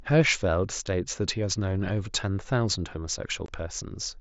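A speech clip with unconcealed Bluetooth headset packet loss: a gap of about 7.5 ms at 0.87 s and one of about 22.5 ms from 3.46 to 3.49 s, the longer fitting three lost headset frames. Nothing fills the missing audio, so each hole has hard edges that can click. On a waveform these show as flat cuts in the signal, and on a spectrogram as thin vertical blank stripes across all frequencies, with the mSBC link's 8 kHz upper limit visible above.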